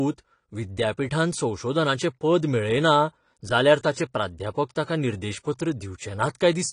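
Throughout, the speech is dull above about 10.1 kHz, with smeared, fizzy sibilants, likely AAC compression at a low bitrate, which fits roughly 32 kbps.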